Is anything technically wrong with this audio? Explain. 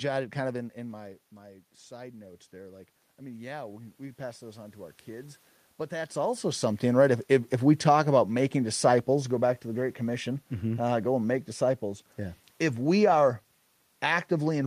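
Yes, there's one fault: automatic gain rising, from 1.87 s to 6.18 s. The level at the microphone dropped by about 14 dB, so the gain control decided the input was too quiet and slowly cranked itself up by about 9 dB over those four-odd seconds. You hear the voice and the room noise swell together, creeping back up rather than jumping. The level shifts around 0.5 s and 6 s are just the talker moving.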